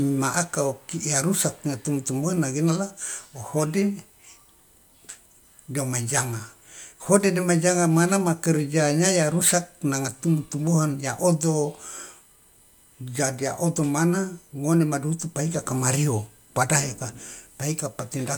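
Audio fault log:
Throughout: USB whine, a thin, steady, fixed-pitch whine sitting far beneath the speech, about 45 dB down, built on a 1 kHz tone with a stack of harmonics that peaks up at 15 kHz, giving it a glassy, high-pitched edge. It comes from the USB bus drawing current in regular 1 ms frames; that pulsing load leaks into the audio through shared power or ground, so the frame rate and its multiples become an audible tone.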